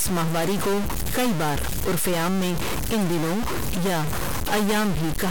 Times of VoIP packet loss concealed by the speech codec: none

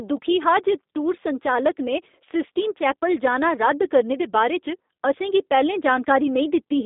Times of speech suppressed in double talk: none

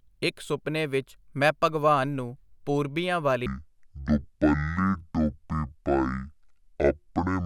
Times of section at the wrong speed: 3.46-7.45

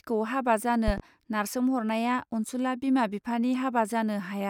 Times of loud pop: 0.88-1.02

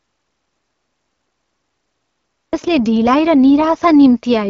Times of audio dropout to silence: 0.00-2.53

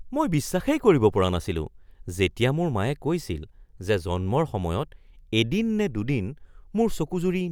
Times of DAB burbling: none

